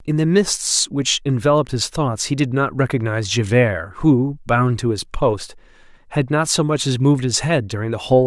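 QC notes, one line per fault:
No faults found in this speech clip. Nothing in it calls for a QC note.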